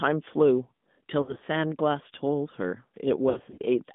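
Throughout, the speech carries the AMR narrowband mobile codec: a buzzy, synthetic tone confined to about 150 Hz to 3.6 kHz, which fits a mid-rate 10.2 kbps mode. A spectrogram shows a hard ceiling with nothing above it and smeared harmonics.

From 1.22 to 1.44 s, lost AMR speech frames break the sound into brief warbles and dips, consistent with about six missing 20 ms frames, the longest run 60 ms. The decoder repeats old settings at falling gain, so the waveform shows short fading, smoothed patches. From 3.30 to 3.60 s the same fault returns more heavily, with roughly ten frames gone over 280 ms.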